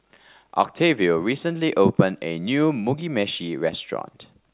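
No technical faults can be heard anywhere in this speech recording.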